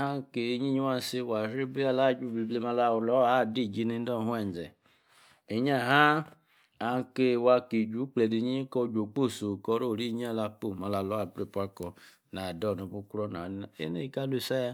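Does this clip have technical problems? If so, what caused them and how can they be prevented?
Yes: from 9.72 to 13.12 s there's pre-emphasis left on. The CD 50/15 µs treble boost never got de-emphasised, so 10 kHz sits about 8 dB hot, making the speech thin and hissy. To prevent it, check the emphasis flag on playback or import so the matching de-emphasis curve gets applied.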